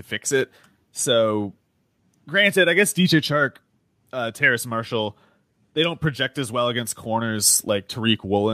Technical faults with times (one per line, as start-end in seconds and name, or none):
none